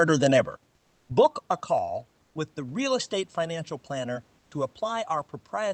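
Speech clip with two kinds of fault. From 0.34 to 1.8 s there is zipper noise, just before "with the". The level falls by roughly 10 dB. It moves in 2 dB steps, about five per second, with no smoothing between them. Each step leaves a small click. Together they make a ticking that rides on the speech while the level moves down. There is also comfort noise in place of the background, in three short gaps: 0.75 to 1.09 s, 2.21 to 2.35 s, and 4.39 to 4.51 s. The last two are brief, at 140 and 120 ms. In each gap the real room noise, about 40 dB below the loud speech, gives way to a smoother noise. That noise is about 2, 4 and 6 dB quieter in turn. The likely cause is Opus discontinuous transmission: the sender stops sending audio in the pauses, and the receiver makes up noise to fill them.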